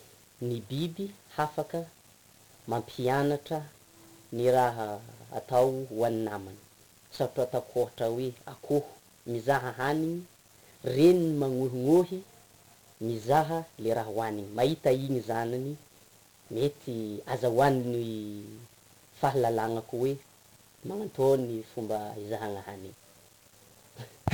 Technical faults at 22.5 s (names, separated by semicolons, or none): 1-bit DFPWM compression